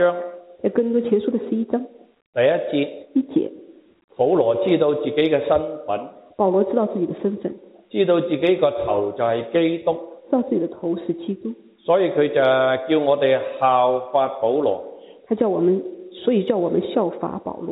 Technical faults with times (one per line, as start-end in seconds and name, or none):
none